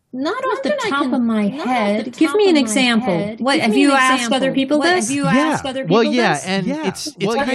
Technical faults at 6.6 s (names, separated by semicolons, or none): doubled audio track